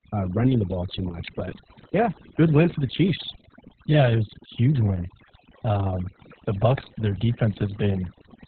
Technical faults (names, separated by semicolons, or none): overdone noise removal; Opus voice compression